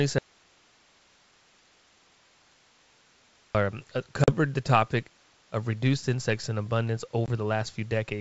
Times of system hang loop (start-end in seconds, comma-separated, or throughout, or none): none